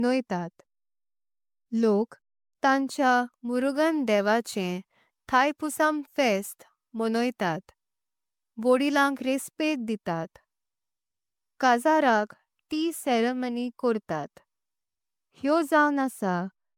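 Across the whole recording, the speech has most likely been run through an MP3 encoder again and again, around ten times, at a rate that fits 128 kbit/s. That is generation loss: every pass requantises on a shifted frame grid, so coding noise and spectral gaps pile up. The result sounds swirly and hollow, consonant onsets smear, and nothing survives above 19.9 kHz.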